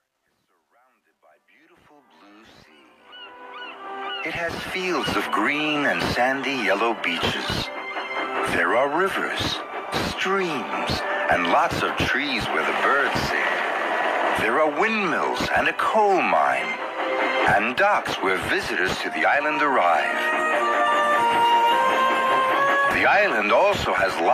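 Gritty grain mars the fade-in from 0.00 to 5.10 s, worst up to 2.57 s. This is truncation distortion on a fade. The gain stage dropped bits without dither, which fits 11-bit truncation, so the quietest levels collapse into coarse square steps.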